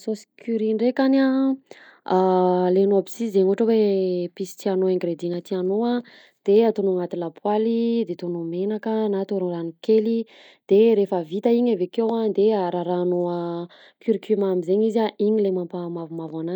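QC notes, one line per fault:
Nothing stood out on listening to this speech recording.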